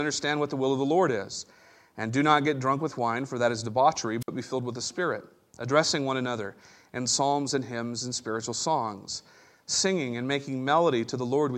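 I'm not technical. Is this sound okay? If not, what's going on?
No. At about 4.21 s, just after "for that is debauchery", a burst of hiss cuts to silence for about 57 ms before "be filled with the". This is a wireless microphone squelch dropout: the radio signal faded, so the receiver briefly muted.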